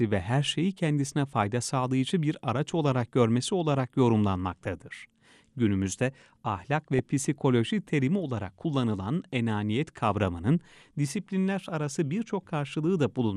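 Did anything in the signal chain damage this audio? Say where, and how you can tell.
Yes. Throughout the speech, a muffled top end and a gurgling, grainy edge point to the codec stage, likely MP2 compression at a low rate, plausibly around 80 kbps. Starved of bits, upper sub-bands switch off and flicker while the remaining bands are coarsely quantised.

DAB burbling hits 17 frames at 4.49 to 4.93 s and 6 frames again at 6.93 to 6.99 s. This comes from the reception stage. Weak-signal bit errors, on the order of a tenth of a percent, slip past error correction and corrupt samples, putting short blips of noise into single sub-bands.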